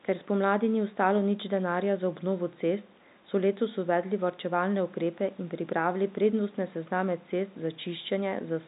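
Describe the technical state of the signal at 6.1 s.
At 6.1 s the audio is intact, with no fault beyond the telephone band limit and the faint room noise present at that point.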